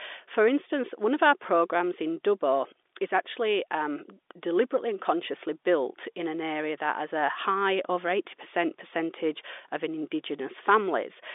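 Telephone-band speech over G.711 mu-law coding, confined to roughly 300 Hz to 3.6 kHz with nothing above 3.8 kHz, and no technical fault anywhere in the clip.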